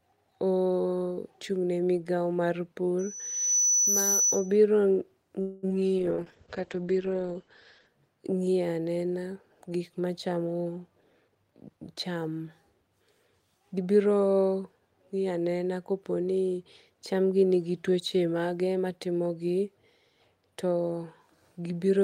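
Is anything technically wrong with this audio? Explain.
Yes, there are five distinct faults.

From 2.99 to 4.57 s, just after "migao mar", there is loudspeaker feedback squeal. The microphone picked up the loudspeaker it was feeding, and the loop gain passed unity at 6 kHz. A piercing tone swells over roughly half a second and sits about 5 dB above the speech.

From 5.41 to 5.65 s there is a call audio freeze. Its likely cause is delayed packets emptying the jitter buffer. The receiver stretched the last sound for 214 ms as a fading buzz rather than dropping into silence, then resumed where it had stopped. Nothing is lost, but playback now runs 214 ms later.

From 5.69 to 5.72 s there is a short concealed packet loss. Some audio never arrived in time: the receiver patched 10 ms by extrapolating from the preceding sound before blending back, and about 20 ms is missing. The result is a brief smear or wobble, and part of a syllable may drop out.

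From 5.99 to 7.94 s there is a call bitrate drop. The bandwidth estimate collapsed, and the encoder fell from 32 kbps to 9 kbps, staying at the bottom for about 1.9 s. Bandwidth shrank from 20 kHz to 8 kHz, so the speech turns muffled, rough and watery.

From 10.62 to 12.30 s there is a jitter buffer speed-up. An overfull buffer was trimmed by repeatedly cutting out short pieces of one or a few pitch periods, removing about a fifth of a second in total. The speech runs at 112% speed with unchanged pitch and sounds noticeably hurried.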